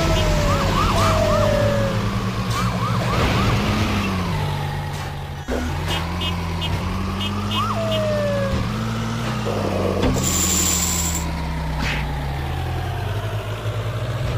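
No faults detected anywhere in the audio.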